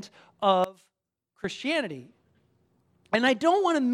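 The clip is speech. From 0.64 s to 1.44 s the sound drops away by about 21 dB, then returns. The likely cause is one channel inverted. Reversed polarity on one side makes the shared content cancel when the channels are summed to mono. Only their small difference remains.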